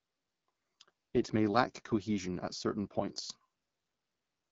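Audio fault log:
Throughout: AMR wideband (HD Voice) codec. The speech sounds rough and raspy, with plainly audible coding damage, which points to one of the lowest AMR-WB rates, near 9 kbit/s. Nothing is present above 7.3 kHz. Voicing is rebuilt from a pulse-excited vocal tract model, and the top band is filled with shaped noise, giving a hissy, grainy sheen. A plain 7 kHz low-pass would leave the voice smooth, and narrowband telephone coding would cut far lower, near 3.4 kHz.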